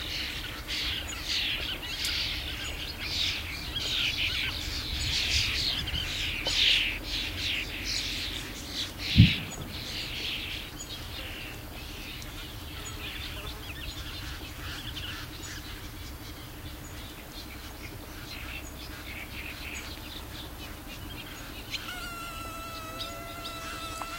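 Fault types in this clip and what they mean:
Dropped buffer (overrun): At 23.49 s the sound jumps abruptly forward rather than pausing, as if a tiny sliver were snipped out and the ends butted together. Roughly 10 ms of material goes missing. The likely cause is the recording program failing to read its samples in time, so the hardware overwrote that block and the audio on either side was joined directly.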